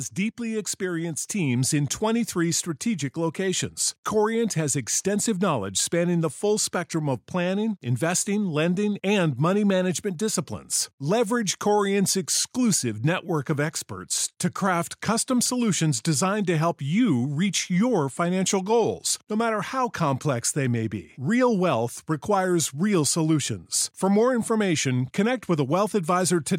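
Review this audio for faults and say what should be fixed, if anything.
Automatic gain rising from 0.16 to 1.31 s. The gain control lifts speech and background together by about 4 dB. To prevent it, set a fixed input level or disable automatic gain control.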